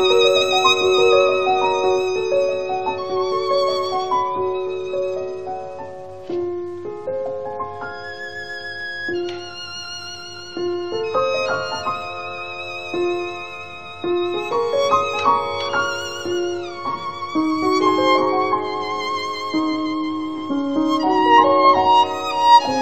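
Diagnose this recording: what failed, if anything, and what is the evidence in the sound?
Nothing failed; no faults heard.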